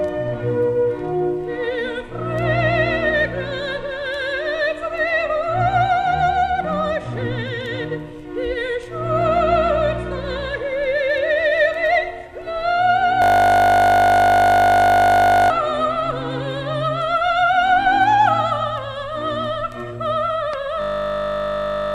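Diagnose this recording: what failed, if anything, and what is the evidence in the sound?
A system hang loop occurs from 13.22 to 15.5 s and again from 20.82 s to the end at 21.94 s. Each time the audio collapses into a steady 50 Hz buzz, because one 20 ms slice repeats exactly, which fits a stalled driver while the hardware kept replaying the same ring buffer. This is a driver or buffer stage failure. Roughly two seconds of audio are lost in the first hang and about one second in the second.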